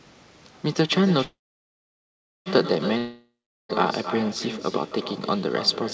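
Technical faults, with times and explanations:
Throughout: echo with no canceller. The far end is playing the call over a loudspeaker and its microphone feeds it straight back, so every phrase has a quieter, thinner copy trailing about a third of a second behind, sitting about 11 dB down.
1.24 to 2.48 s: call audio freeze. The sound hangs, buzzes briefly, then goes quiet for about 1.1 s before resuming exactly where it stopped. Packets were likely held up and the jitter buffer ran dry, so a 1.22 s gap was inserted but nothing was lost.
2.98 to 3.71 s: long network dropout. The last sound smears into a fading buzz, then there's about 0.39 s of silence, and the audio comes back further along with roughly 0.72 s gone. This is likely a stretch where no packets arrived at all, so the receiver had nothing to play.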